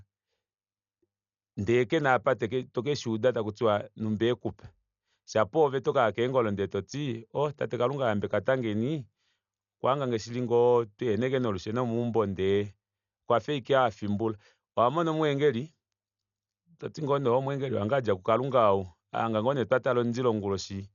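From start to end, the speech carries heavy codec damage, likely from Dolby Digital compression. Nothing is heard above 7 kHz, so the voice sounds dull and closed in. The damage fits a bitrate around 48 kbps. At that rate the encoder narrows the band and leaves many frequency lines without detail. The decoder fills those gaps with noise. The result is a rough, fluttering hiss clinging to voiced sounds.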